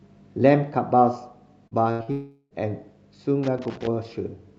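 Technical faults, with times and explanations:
1.67–1.74 s, short concealed packet loss: a brief smear where about 40 ms of audio failed to arrive and the receiver extended the preceding sound to cover it.
1.91–2.02 s, burst of packet loss: a held, fading buzz or hiss lasting about 80 ms, as consecutive packets went missing and the receiver stretched the last sound.
2.03–2.10 s, short concealed packet loss: another quick wobble where roughly 40 ms was lost and bridged by continuing the previous sound before rejoining the real signal.
2.11–2.54 s, long network dropout: a drawn-out fading buzz, briefly silent at the end, then audio resumes further on; likely about 400 ms that never arrived.
3.43–3.87 s, loose connector crackle: an irregular burst of scratchy crackle, caused by a poor contact rapidly making and breaking and chopping the signal.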